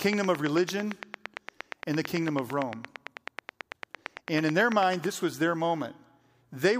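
From 0.02 to 5.05 s a train of clicks runs at a regular 9 per second, about fifty in all, peaking well above the speech and ticking through pauses too. It is likely from electrical interference or a faulty connection or power supply. Spectrograms show evenly spaced thin vertical broadband lines, and waveforms show sharp spikes.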